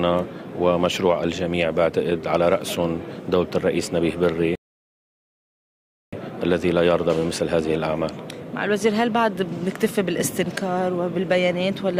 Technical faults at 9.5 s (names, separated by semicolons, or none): none